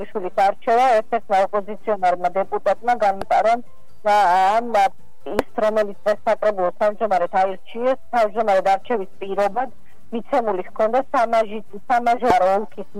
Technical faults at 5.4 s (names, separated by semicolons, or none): damaged data in a compressed stream